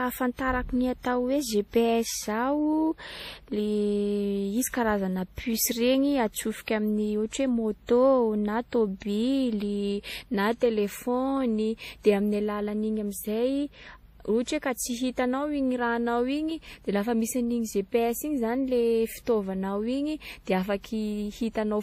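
Throughout the speech, the audio was likely transcoded between lossy codecs, one low-rate MP3-like encode re-encoded by a WMA-type codec. The second pass spends bits on the first pass's artefacts, so the artefacts of both codecs sit together, with nothing above 15.4 kHz.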